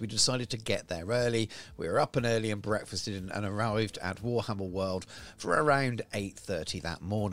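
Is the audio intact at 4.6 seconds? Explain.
Yes, the audio at 4.6 seconds plays through cleanly, with no dropout, click, distortion or other fault at that point.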